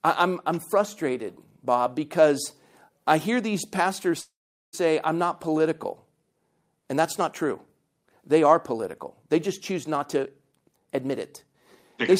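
At 4.21 s, right after "I hear these pastors", the speech stops and the last sound trails on as a fading buzz, then about 0.41 s of silence before "say I'm" resumes at 4.75 s. This call audio freeze likely came from delayed packets emptying the jitter buffer. The gap of roughly 0.52 s was inserted with no speech lost, so everything afterwards plays that much later.

From 9.97 s to 11.54 s, just after "political they just choose", the speech sounds rushed, running at about 129% speed with unchanged pitch. This is a jitter buffer speed-up. The receiver trimmed short pitch-period slices again and again, about half a second in total, to shrink the excess buffered delay.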